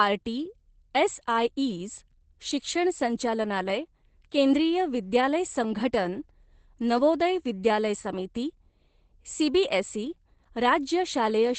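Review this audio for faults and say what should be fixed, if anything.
Opus voice compression runs throughout: the speech was coded by the SILK linear-prediction coder at what sounds like a low bitrate, around 12 kbps, with the band cut to wideband, so nothing remains above 8.5 kHz. The coarse excitation coding leaves the speech plainly muffled, hoarse and faintly robotic from start to finish. To prevent it, encode at a higher Opus bitrate so the codec keeps full bandwidth and finer excitation detail.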